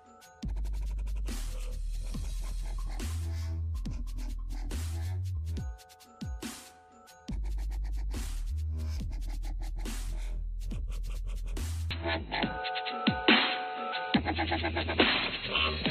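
At 11.91 s, with no gap, the sound turns dull or boxy and stays that way to the end, with a level step of roughly 5 dB. The input has likely switched to a poorer device. A spectrogram shows the upper band cut away and a new noise floor about 40 dB below the signal.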